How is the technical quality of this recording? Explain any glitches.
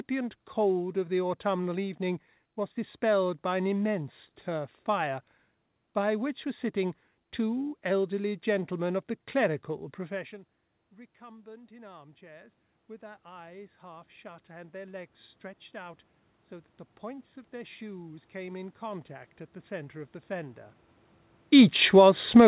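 The recording has two automatic gain changes, heard through a telephone-style call path with nothing above 4 kHz, as you'd expect from G.711 mu-law.

Automatic gain rising, 10.09 s to the end: right after "gentlemen of the clerical" the talker moves off-mic, and the input drops by about 22 dB. The gain control slowly pushes the level back up, so voice and room noise swell together.

Automatic gain falling, 21.76 to 22.14 s: after the talker moves again around 21 s, the control decides the input is too loud or too noisy and pulls the level down by about 3 dB.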